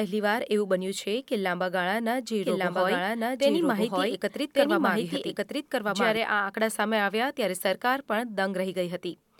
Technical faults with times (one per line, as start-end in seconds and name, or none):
2.43-6.17 doubled audio track